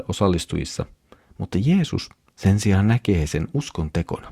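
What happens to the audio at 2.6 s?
Nothing goes wrong at 2.6 s: the speech there plays through intact, with no dropout, click, distortion or other fault at that moment.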